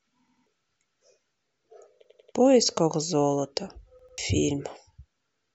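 Repeated buffer at 0.28 to 0.46 s, 2.04 to 2.32 s and 3.99 to 4.18 s: new audio failed to arrive in time, so playback replayed the last block of speech, a piece about 93 ms long, which fits a 4096-sample buffer. It plays twice extra in the first and third stutters and three times extra in the second, each repeat joined abruptly. The speech then resumes further on, skipping roughly a fifth to a third of a second.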